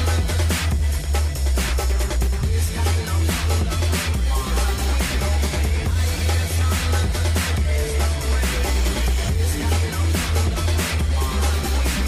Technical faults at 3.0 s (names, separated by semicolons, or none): none